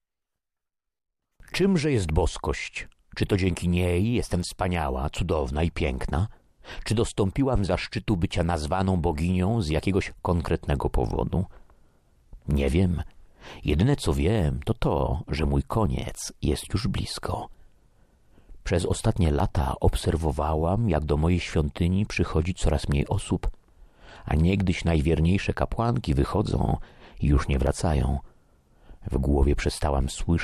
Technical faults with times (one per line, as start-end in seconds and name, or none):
19.40 dropped buffer (overrun)
27.67 dropped buffer (overrun)